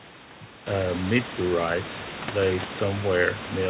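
Nothing is technically wrong with this speech clip.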